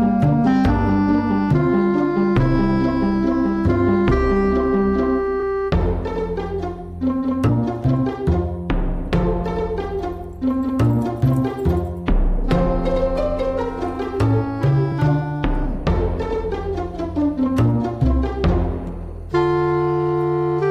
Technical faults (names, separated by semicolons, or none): compressed frames skipped